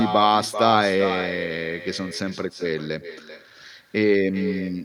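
Throughout, the speech carries echo with no canceller: a discrete copy, looped back from a far-end loudspeaker, returns roughly 0.4 s later, about 9 dB down, unlike reverb's smeared tail.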